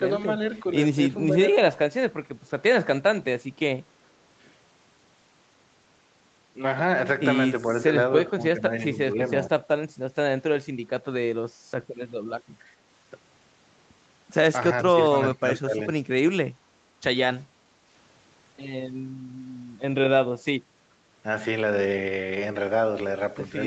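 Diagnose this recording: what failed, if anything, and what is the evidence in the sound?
The echo canceller in call processing likely suppressed speech in double talk, ducking the voice by up to about 20 dB at 1.27, 1.52, 8.35, 8.92, 14.87, 15.34 and 16.0 s.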